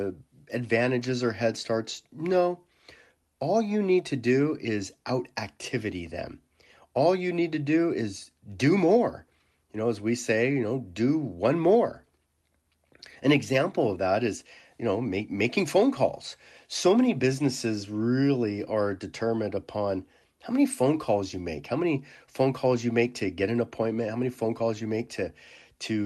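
No faults detected; the speech shows the usual coding texture and a top end that stops near 12 kHz, consistent with an ordinary call path running Opus at around 32 kbps.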